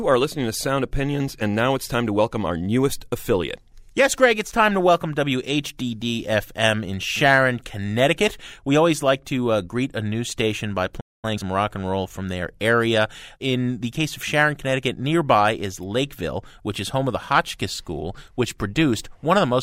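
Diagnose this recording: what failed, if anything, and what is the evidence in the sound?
A playback stall interrupts the speech at 11.00 s, and the output goes silent for about 0.23 s until 11.25 s. The stage is playback. The likely cause is the player's buffer running dry or its output thread being blocked, leaving the device without samples.

Time-compressed catch-up follows from 11.25 to 11.47 s. The speech runs at twice normal speed at unchanged pitch. The player is shedding its backlog by cutting out short segments and cross-fading the joins before returning to normal pace.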